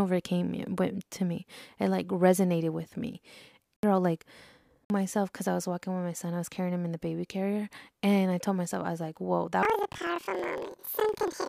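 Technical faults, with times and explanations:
9.63 to 11.49 s, planar audio read as interleaved: the final stretch of speech jumps an octave (12 semitones) higher and picks up a flutter at about 21.5 Hz. Each block of roughly 46.4 ms, which fits a 2048-sample block, stores all left-channel samples followed by all right-channel samples, but the player treats them as alternating left-right pairs. So each block plays twice at double speed, left then right. The overall pace stays correct, but the pitch doubles and the block boundaries repeat as a flutter.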